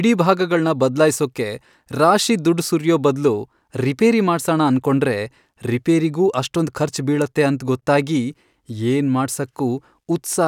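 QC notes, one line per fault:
No technical faults are audible anywhere in the speech; the signal stays continuous and stable, with nothing that points to a problem in the recording or transmission chain.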